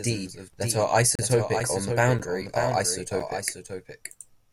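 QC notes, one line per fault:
throughout: doubled audio track. The speech carries a full-band echo about half a second behind, roughly 5 dB quieter, with no decay or room colour. This is likely the same audio mixed in a second time through a slower capture path or misaligned edit.
0.53 to 3.67 s: periodic USB or driver dropouts. About four short ticks, each roughly 4 ms of silence, recur every 1.024 s while speech is present. A background task repeatedly stalls the USB bus or audio driver, so each stall drops a sliver of audio and leaves silence.
1.15 to 1.19 s, 2.19 s, 3.20 s: gap between stream segments. Hard-edged holes of 34.4 ms, 9.0 ms and 6.9 ms cut into the speech, one per second. Timestamps between one-second segments leave small gaps that the player fills with silence, adding time without losing audio.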